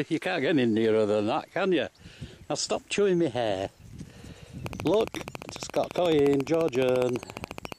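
A train of clicks runs from 4.66 to 7.73 s: around fifty near-identical pulses at a regular 14.4 per second, likely from nearby interference, heard as steady ticking.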